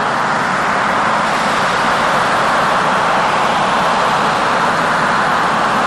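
Throughout, a doubled audio track puts a second full-band copy about 150 ms behind and about 5 dB quieter, likely from a slower capture path; the waveform shows repeated onsets with no decay. At 3.24 s, damaged data in a compressed stream makes the decoder lose sync, heard as a brief blip; the spectrogram shows a narrow broadband smear.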